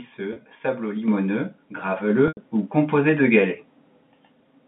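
At 0.33 s there's a short packet loss with pitch repetition, about 30 ms, which fits one dropped packet. The receiver covers the hole by looping the last pitch period, so you hear a brief, slightly buzzy hold on the speech. The second one at 2.28 s runs about 90 ms, probably three packets. The loop is longer than its roughly 50 ms fade, so it dies toward silence before the speech cross-fades back in around 2.37 s.

The microphone volume gets stepped up twice: about 7 dB at 1.08 s and another about 3 dB at 2.1 s. The call software judged the input too quiet and bumped the device level in one jump each time. Because it happens at the input, voice and background noise rise together, and the second step lands just before the longer dropout. Through all of this the band-limited G.711 telephone line is audible, with nothing much above 3.6 kHz.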